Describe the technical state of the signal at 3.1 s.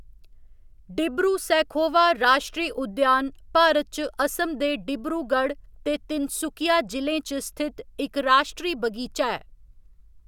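The signal at 3.1 s is intact, with no audible fault at that moment.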